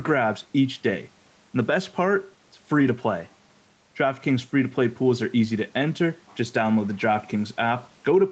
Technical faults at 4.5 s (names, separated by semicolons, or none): gain pumping